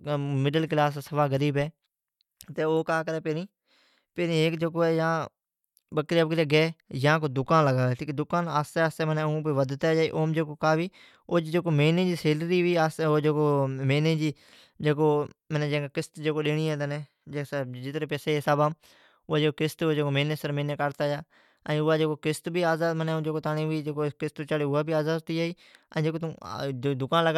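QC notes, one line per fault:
No faults found in the speech. Nothing in it calls for a timed entry.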